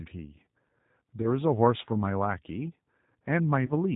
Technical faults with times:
0.00-3.95 G.729 codec
1.22-1.27 VoIP packet loss concealed by the speech codec
3.66-3.72 VoIP packet loss concealed by the speech codec

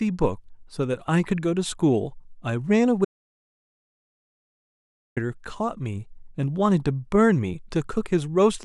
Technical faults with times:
3.05-5.17 audio dropout to silence

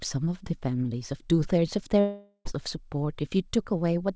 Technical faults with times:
2.00-2.47 long network dropout

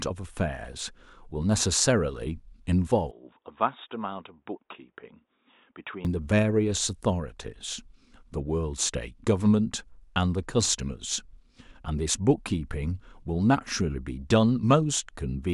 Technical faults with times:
3.11-6.05 input switched to a poorer device

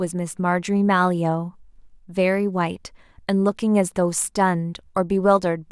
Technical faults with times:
none

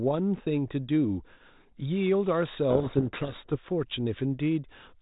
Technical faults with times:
2.70-3.56 codec payload misread

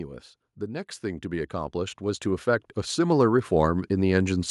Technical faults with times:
0.60-4.46 automatic gain rising

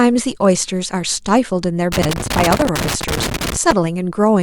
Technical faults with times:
1.92-3.72 loose connector crackle

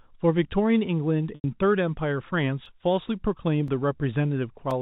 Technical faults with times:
1.35-1.44 packet loss with pitch repetition
2.65-4.71 periodic USB or driver dropouts

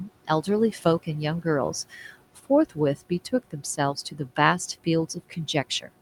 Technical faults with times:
0.00-6.02 noise suppressor artifacts
2.66-2.77 speech cut by the noise suppressor

